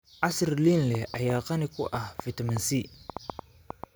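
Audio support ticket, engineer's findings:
Train of clicks, 0.95 to 3.85 s. About fifteen sharp pops, irregular, roughly 4.2 per second, well above speech level. Likely nearby equipment interference or failing interface injecting pulses.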